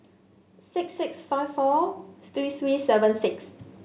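Automatic gain rising from 0.73 s to 3.3 s: the gain control judged the speech too quiet and raised its gain slowly by about 8 dB, so voice and background noise swell together. All of it sits below 4 kHz, which fits a narrowband telephone codec.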